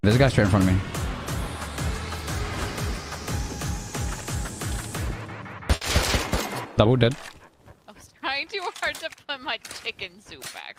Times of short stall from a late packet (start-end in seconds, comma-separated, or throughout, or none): 5.75-5.83